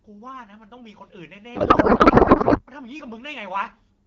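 Speech coded with AMR wideband, its light coding roughness consistent with a rate near 12.65 kbit/s, suffers a codec payload misread from 1.55 to 2.62 s. The sound points to octet-aligned frames being unpacked as bandwidth-efficient, so the decoder pulls its fields from the wrong bit positions and replaces the speech with garbled, warbling noise that barely tracks it.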